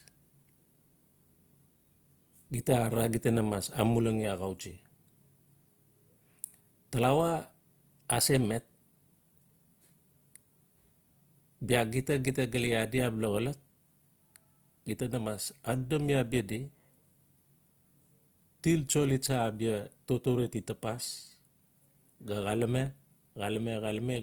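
Across the whole speech clip the sound is grainy and rough, with a noisy, hissing texture where tonal detail should be, while the top end still reaches about 20.1 kHz. This plainly audible damage is likely Opus compression in its music mode, at a rate that fits roughly 24 kbps, filling starved bands with noise rather than leaving gaps.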